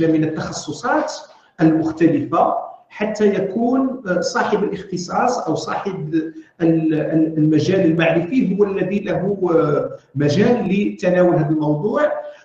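From 6.97 s to 10.99 s the audio shows periodic USB or driver dropouts: about five brief losses, spaced exactly 1.0 s apart. Each time, something stalls the USB transfer or the audio driver, and a tiny fraction of a millisecond of samples is skipped outright rather than replaced with silence. The resulting discontinuity in the waveform is heard as a small, regular tick once per second, audible only while signal is present.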